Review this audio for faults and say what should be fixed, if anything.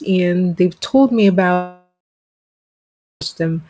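From 1.54 s to 3.22 s the sound stops and a buzzy continuation of the last sound fills the gap. It fades within a few tenths of a second. About 1.27 s of near silence follows. The sound resumes at 3.22 s with roughly 1.67 s missing. This is likely a long network dropout. No packets arrived, so the receiver stretched the final sound and then gave up. The G.722 call path, with nothing above 8 kHz, carries the surrounding audio. Preventing it means a more stable network link, or redundancy and retransmission to cover loss bursts.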